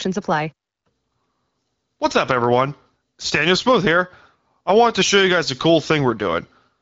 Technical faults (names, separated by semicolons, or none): none